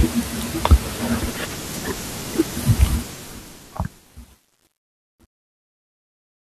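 From 2.87 s to the end at 6.51 s, the speech turns gritty and grainy as it fades out, and from 3.29 s onward it is at its worst. This is truncation distortion on a fade. The fade's gain stage appears to keep too few bits and applies no dither, which points to roughly 10-bit resolution. As the level drops toward the smallest step, the waveform collapses into coarse square steps.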